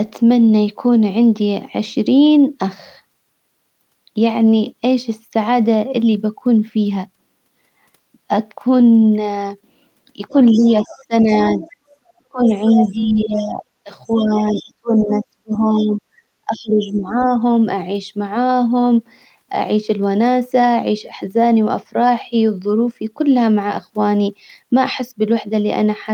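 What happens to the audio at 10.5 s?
Around there the speech is briefly suppressed during double talk, between 10.29 and 11.3 s. The level dips by about 15 dB in patches adding up to roughly a third of a second, most likely an echo canceller clamping down while both sides talked.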